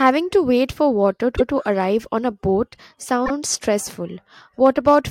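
Repeated frames in this speech clip: a run of compressed frames reached the decoder twice, so it replays the same slice of audio. A 144 ms block repeats at 1.36 s and a 48 ms block at 3.25 s, each heard as a brief stutter that lengthens the audio.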